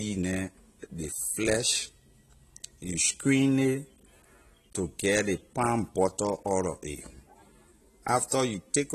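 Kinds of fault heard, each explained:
Low-bitrate audio saved at a high bitrate: the speech has a hard ceiling with nothing above 14 kHz across all 9 seconds, plus the leftover artefacts of a starved encoder, yet it sits in a high-rate MP3. The likely story is that it was squeezed hard first, which fits something like 32 kbit/s AAC, then re-saved at around 320 kbit/s. The bigger file can't bring back what that first pass threw away.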